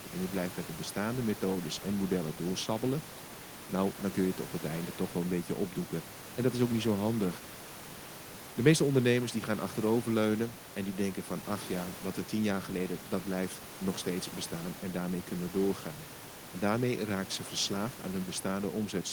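No technical faults can be heard in the speech; the only thing beneath it is the room's own background noise, about 17 dB below the voice, which belongs to the recording space rather than to the system.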